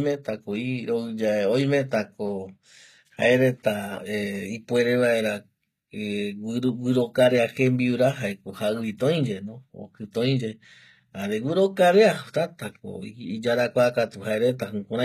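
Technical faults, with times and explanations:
Throughout, HE-AAC compression: the treble sounds rebuilt rather than real, with gritty, lispy s sounds and nothing above 14.9 kHz, likely a low-bitrate stream around 20 kbps.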